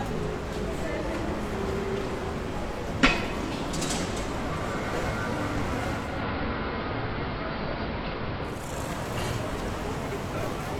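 From 5.89 to 8.79 s, digital radio blending to analogue: the receiver lost its digital signal and cross-faded to AM, adding hiss roughly 25 dB below the signal.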